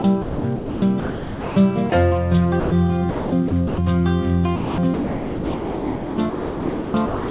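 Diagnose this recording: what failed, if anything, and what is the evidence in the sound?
In call processing, the sender's voice detector likely kept switching transmission on and off. The sound is chopped by the voice detector from 0.02 to 1.56 s, 3.1 to 3.78 s, and 4.56 s to the end, with its holes filled by comfort noise.

The same detector likely judged the sound as background and stopped sending, causing sound dropped by the voice detector at 1.9 s and from 2.6 to 2.72 s. Steady comfort noise fills 20 ms and 120 ms gaps within the 4 kHz-limited call band.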